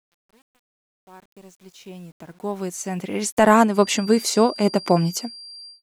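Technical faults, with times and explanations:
0.00–3.50 s, truncation distortion on a fade: The speech fades in from near the start and reaches full level at 3.50 s. The quiet part of that fade-in sounds gritty and grainy, and it is at its worst from 0.00 to 2.61 s. The fade was computed with too few bits and no dither, so the waveform collapses into coarse square steps. The roughness points to about 9 bits.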